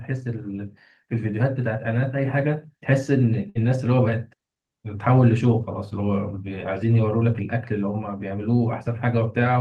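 At 3.49 to 3.58 s, a burst of packet loss drops 60 ms of speech. The receiver stretches the last sound, fading it, then resumes further on.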